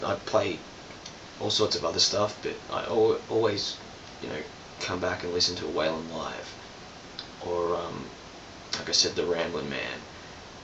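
No technical faults can be heard anywhere in this clip.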